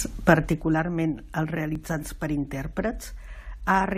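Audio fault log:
0.28–0.84 s, zipper noise: the level drops about 10 dB in 2 dB jumps, roughly ten a second, and each unsmoothed step leaves a little tick you can hear.
1.75 s, overlap between stream segments: a sliver of speech gets trimmed where two segments' timestamps overlap, so the waveform jumps and you hear a tiny skip, consistent with 2-second segments.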